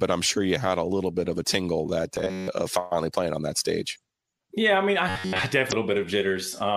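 From 2.16 to 2.48 s and again from 5.09 to 5.51 s, the speech turns into a rigid metallic buzz at 93.8 Hz. This is robotic sound from repeated short buffers, most likely caused by audio arriving too late so that roughly a 10.7 ms chunk is looped in place of most of the real signal. A spectrogram shows evenly spaced horizontal harmonics, and the waveform shows a repeating shape.

From 5.68 to 5.73 s, damaged data in a compressed stream makes the decoder lose frame sync, producing a brief glitch. It appears as a brief vertical smear on the spectrogram and a discontinuity in the waveform.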